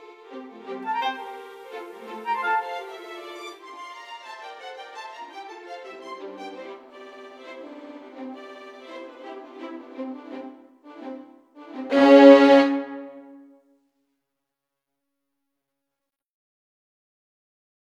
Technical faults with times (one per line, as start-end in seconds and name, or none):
1.06-3.65 digital radio blending to analogue